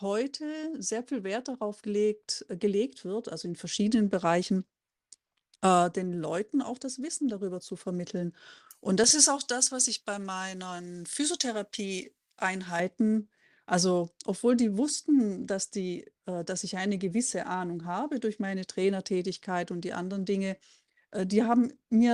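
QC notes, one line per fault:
9.04–12.80 s, pre-emphasis left on: the speech turns thin, bright and hissy, with the sibilants spitting forward and the body of the voice receding. The treble boost applied before recording or transmission was never undone by the matching de-emphasis, leaving 10 kHz about 11 dB hotter than 1 kHz. That tilt fits a J.17 emphasis curve left uncorrected for this stretch.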